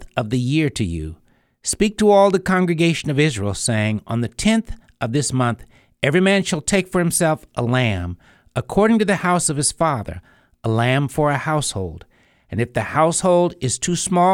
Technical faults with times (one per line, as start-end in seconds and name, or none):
none